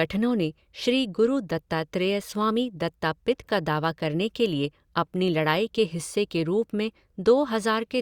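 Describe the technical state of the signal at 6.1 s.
At 6.1 s the signal is intact, with no dropout, clipping, distortion or other fault audible at that moment.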